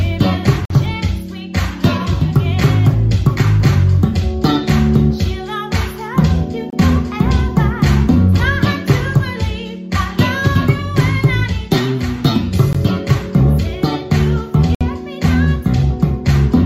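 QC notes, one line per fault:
0.65–0.70 s, 6.70–6.73 s, 12.73 s, 14.75–14.81 s: gap between stream segments. Hard-edged dropouts to silence lasting 49, 26, 19 and 60 ms, all falling on a 2-second grid that fits 2-second segments. Timestamps left holes between segments, which the player padded with silence. Nothing is missing.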